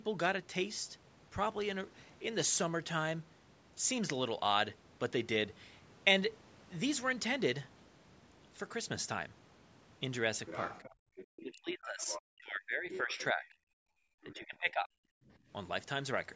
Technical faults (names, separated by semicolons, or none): other side's voice leaking through; background gated by the echo canceller; speech suppressed in double talk